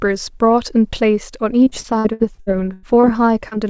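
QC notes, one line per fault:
1.64–3.06 s, repeated packet loss (robotic sound): the speech turns choppy and robotic, with pieces dropping out. Nine gaps in this stretch, the longest 94 ms, were each patched by extending the preceding sound, so about 28% of the span is synthetic fill rather than real audio.
3.48 s, short concealed packet loss: a brief smear or wobble lasting about 30 ms. That slice of the call arrived too late for the decoder, which bridged it by continuing the previous sound and then blending back into the real signal.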